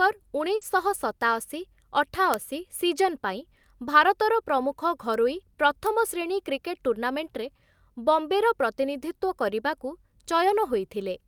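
From 0.55 to 0.64 s a burst of packet loss hits the speech: about 60 ms of sound is stretched and faded to fill the gap, then the audio skips ahead with about 60 ms missing, unlike a clean splice. Inside that stretch, from 0.61 to 0.63 s, a lost packet rebuilt from error correction plays a rougher, noisier 20 ms copy rather than silence or a held buzz. A bit error spike, one flipped sample, gives a sharp broadband tick at 2.34 s and another at 5.14 s, and a third at 5.87 s spans two samples. Each is an isolated click with no link to the surrounding sound, unlike a dropout.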